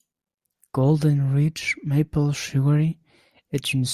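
No technical faults occur at any point in the recording.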